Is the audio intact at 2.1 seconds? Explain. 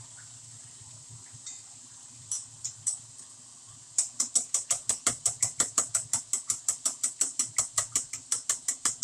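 Yes, the audio is intact at 2.1 seconds, with no dropout, click, distortion or other fault at that moment.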